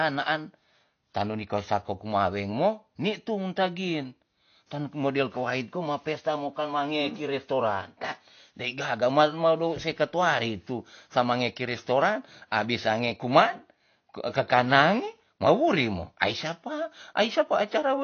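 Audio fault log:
Throughout, AAC compression. Nothing is heard above about 6.5 kHz, so the speech sounds dull and muffled. Codec damage is plainly audible. Sibilants turn fizzy and smeared. This fits low-bitrate AAC-LC near 32 kbps, likely cutting the upper band to save bits.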